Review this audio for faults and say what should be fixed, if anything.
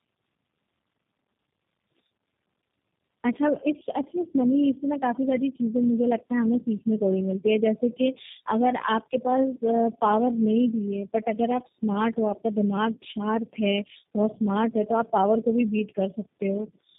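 Throughout, the speech sounds rough, muffled and warbly, with nothing above 3.7 kHz. This is tandem speech coding: the call was decoded and re-encoded at each link border, which fits three low-rate 8 kbit/s coders in a row, each compounding the previous one's damage. To prevent it, keep the call in one codec end to end using transcoder-free operation or codec negotiation.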